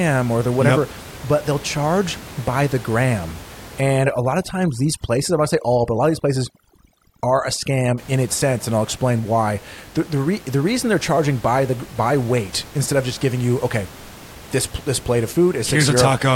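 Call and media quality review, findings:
Overdone noise removal, 3.81–7.98 s, from "charge by the gram" to "in its sense and". Suppressor set too aggressive, gating bands near its noise estimate along with quiet speech. Room noise (about 20 dB down) drops and breaks into twinkling specks.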